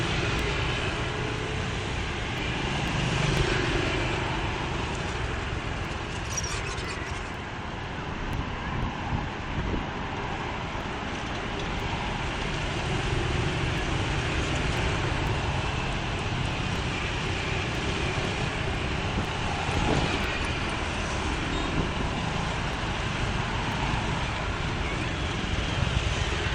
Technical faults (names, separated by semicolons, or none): periodic USB or driver dropouts